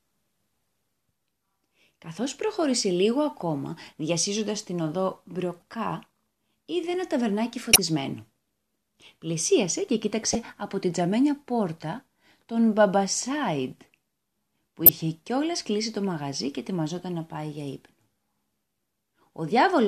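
Short chirps and noise bursts cut through the speech five times. A faint blip comes at 5.60–5.62 s, just after "ακόμα διασύζοντας την οδό". Loud squeaks follow at 7.73–7.78 s and 10.33–10.35 s, the second just before "από την τζαμένια πόρτα", and another at 14.86–14.89 s. A quiet tick at 16.99 s sits between "κλείσει το μαγαζί και" and "να πάει για ύπνο". Each is a corrupt frame decoded: flipped bits in a compressed frame, played anyway, pushed energy to the wrong frequencies for roughly one to a few frames' length.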